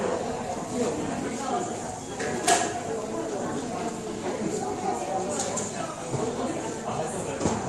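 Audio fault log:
No faults found; the everyday sounds pass through the Opus call path as normal, with its usual band limit near 12 kHz.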